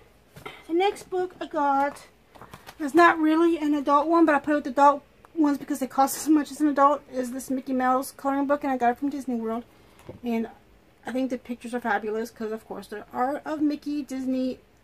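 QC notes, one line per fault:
4.77–5.40 s and 8.28–8.81 s, drift correction step: playback jumps 5.4% fast, raising pitch about 92 cents, likely clock-matching resampling; spectrogram harmonics step up, then snap back.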